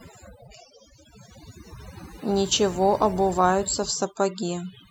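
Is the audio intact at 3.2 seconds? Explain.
No. At 3.2 seconds the background has dropped and broken up into twinkling specks. This is overdone noise removal, present throughout the clip: an over-aggressive noise reducer cuts individual frequency bands near its noise estimate, taking quiet speech detail with them.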